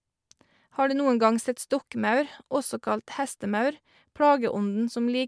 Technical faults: none

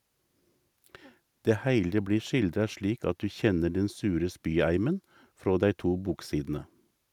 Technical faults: none

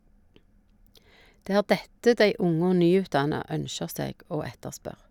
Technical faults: none

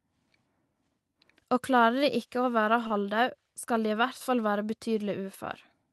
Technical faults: short stall from a late packet

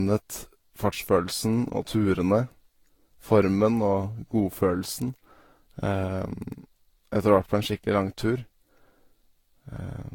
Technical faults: generation loss

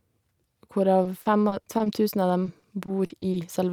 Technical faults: repeated packet loss (robotic sound)

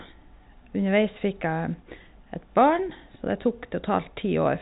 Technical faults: none

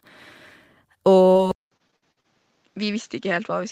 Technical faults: short concealed packet loss; input switched to a poorer device; repeated packet loss (robotic sound)

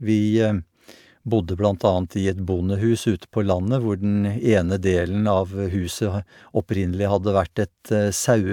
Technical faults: none

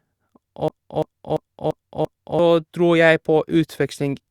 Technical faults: system hang loop

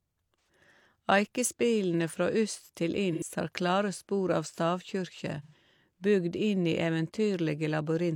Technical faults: AAC frame loss with concealment

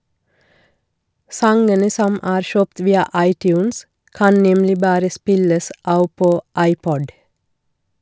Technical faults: resampler restarted on every block

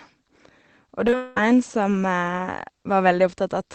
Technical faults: short concealed packet loss; long network dropout

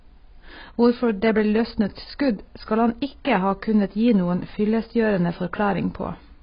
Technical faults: AAC compression

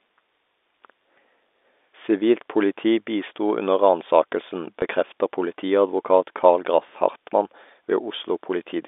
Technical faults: packet loss with last packet repeated

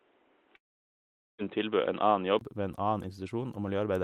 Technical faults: input switched to a poorer device; long network dropout

